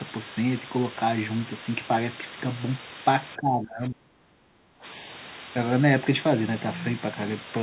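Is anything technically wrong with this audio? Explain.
Yes, two faults are audible.

Throughout, a constant, even hiss sits only about 10 dB below the speech, with no crunchy distortion. This is low bit depth with dither: the signal was reduced to roughly 5 bits, with dither added before rounding to turn the coarse error into steady white noise.

From 3.36 to 4.84 s the speech dips sharply, by roughly 25 dB at its deepest, for about one and a half seconds. This is speech suppressed in double talk. The likely cause is an echo canceller that could not separate the talker from loudspeaker echo while both sides spoke, so it attenuated everything.

The call path's band limit is audible too, with nothing above 4 kHz, as expected for G.711 mu-law.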